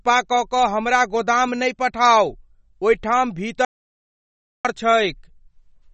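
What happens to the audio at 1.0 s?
At 1.0 s you're hearing the same thing as everywhere else in this speech: likely MP3 compression, running the whole clip. Nothing survives above 8.3 kHz, and the starved bit budget, which points to a very low bitrate, leaves flickering weak bands that sound watery, swirly and smeared.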